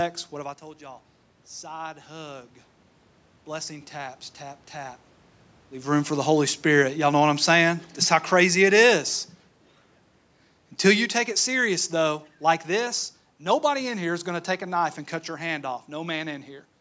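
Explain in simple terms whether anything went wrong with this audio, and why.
Something did go wrong: automatic gain falling. The call's automatic volume control judged the incoming sound too loud or its background noise too strong, and started turning it down on its own, easing it lower between about 6.12 and 9.18 seconds, just after "room for". You hear the speech sink gradually over those three seconds, and the background noise sinks with it, because the control lowers everything together rather than the voice alone.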